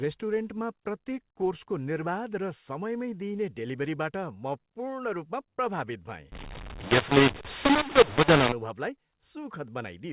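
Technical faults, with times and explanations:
6.32 to 8.52 s, mu-law and A-law mixed up: the speech here was coded as A-law but decoded as if it were mu-law, so each 8-bit code maps to the wrong level on the log curve. Some samples jump too loud and others drop too quiet, and the quietest ones get pushed well above silence. That's why the speech turns harsh and gritty, and why the small gaps fill with hiss. Around it, the normal 8 kHz A-law telephone sound carries on.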